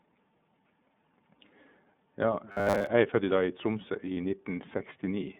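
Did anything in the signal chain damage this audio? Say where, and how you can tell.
Yes. Codec stage: the whole clip is iLBC-coded. A spectrogram shows nothing below 150 Hz or above 3.6 kHz, with rough, synthetic texture consistent with 30 ms frames.

Driver or buffer stage: from 2.52 to 2.88 s, just before "er født", a rigid 100 Hz robotic buzz appears. It likely comes from repeated 10 ms buffers replacing most of the audio, which shows as evenly spaced harmonics on a spectrogram.

Network stage: from 4.14 to 4.17 s, a lost iLBC frame of 30 ms was concealed as a held, buzzy vowel. The waveform shows one repeated pitch cycle, then immediate recovery.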